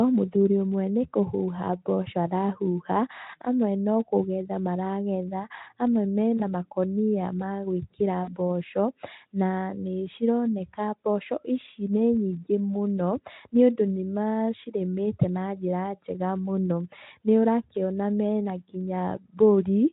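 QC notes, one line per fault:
6.37–6.42 s, VoIP packet loss concealed by the speech codec: one lost frame, about 20 ms, after "no kũgetha maragetha amwe"; the decoder extrapolates pitch and filter, briefly smearing speech into a fading buzzy tone or coloured noise.
8.24–8.33 s, VoIP packet loss concealed by the speech codec: two consecutive frames lost, about 40 ms, after "makũnia ma gwĩkĩra"; extended extrapolation stretches into a longer decaying buzzy tone or coloured noise before recovery.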